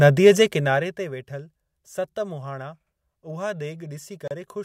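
From 0.40 to 1.17 s the speech drops by roughly 15 dB, and the drop carries zipper noise: a fine ticking that rides on the voice only while the level is moving. The gain is being changed in coarse jumps, around forty a second, with no smoothing between them, so each jump leaves a small click. A properly smoothed fade glides down silently. Here the texture is grainy and sounds like it is stepping.

At 4.28 to 4.31 s there is a gap at a join of encoded pieces, a hole of about 32 ms in otherwise continuous speech. Two separately encoded segments were joined without trimming, so the encoder's start-up delay and end-of-file padding remain as silence. A dropout from lost data would skip material. Here the voice picks up exactly where it stopped. The edges of the hole are smeared by the codec rather than cut clean.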